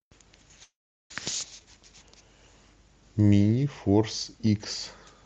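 At 0.63–1.11 s, a call audio freeze: the jitter buffer likely ran dry, so a brief fading buzz or hiss gives way to silence before the speech resumes intact.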